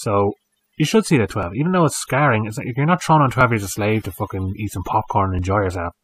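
Overdone noise removal runs through the whole speech clip: the noise reduction was set so aggressively that frequency bands near the noise estimate are pulled down or cut, taking quiet parts of the voice along, so the background drops and breaks up into twinkling specks.

Overlap between stream segments causes tiny skips at 1.43, 3.41 and 5.39 s, spaced roughly every 2 seconds. Neighbouring segments' time stamps overlap, so the player trims 6 to 15 milliseconds of audio that was never actually repeated, and the waveform jumps.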